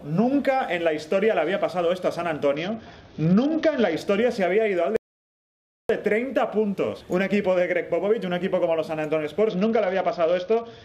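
The audio twice shows a Bluetooth SBC bit pool drop, first from 2.55 to 3.97 s and again from 9.49 s to the end. In each stretch the treble dulls and a gritty, grainy noise rides on what remains. The sound fits a congested link forcing the encoder from a bit pool of around 28 down to 8, near 72 kbps, so the upper sub-bands are starved and the lower ones coarsely quantised. Unlike a simple low-pass filter, the loss comes with added grit, and it switches in and out with the link rate rather than staying constant. Between these, from 4.96 to 5.89 s, there is an audio dropout to silence lasting about 0.93 s. The sound cuts off mid-flow and returns mid-flow, with silence in the gap and no room tone, most likely because the input was lost while recording continued. This sets it apart from a noise gate or a fade, which would taper, and from packet-loss concealment, which would fill the hole with smeared or repeated sound rather than leave it empty.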